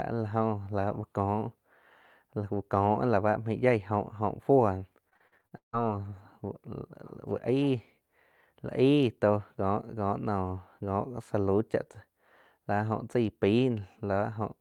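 Speech here, and the trouble sits between 5.09 and 5.75 s, where you get repeated packet loss with that robotic sound. There are eight dropouts packed into roughly two-thirds of a second, the longest about 158 ms. Each hole gets papered over by stretching the last bit of audio, so about half that span is concealment rather than real signal. It comes out choppy, with chunks missing.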